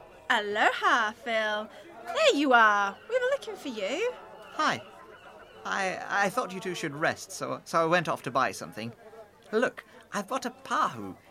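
No faults are audible anywhere in the sound.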